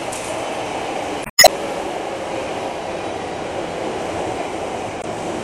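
Damaged data in a compressed stream at 1.22–1.49 s and 4.99–5.05 s: corrupted bytes make the decoder misread frames and lose sync, producing brief glitches.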